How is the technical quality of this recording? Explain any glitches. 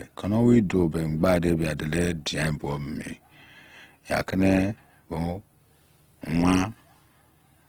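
The recording carries plainly audible codec damage across the whole clip; there are no isolated glitches, just one continuous degradation.

Opus compression is the likely cause, heard from start to finish. The speech keeps its full bandwidth, with content reaching about 20.2 kHz, but the grain and roughness suggest the music-oriented CELT mode starved of bits, fitting a low rate near 16 kbps. Rather than dropping bands, the encoder fills them with folded copies of lower bands or noise, so the speech sounds grainy, rough and noisy instead of swirly.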